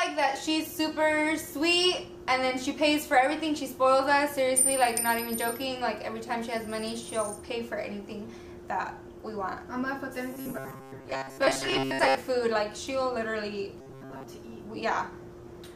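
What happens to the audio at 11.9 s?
Audio likely arrived too seldom, so the software kept repeating a short buffer of about 7.5 ms in place of most of the real signal. This is robotic sound from repeated short buffers, from 10.34 to 12.15 s, and the loops impose a rigid, metallic buzz at 134 Hz.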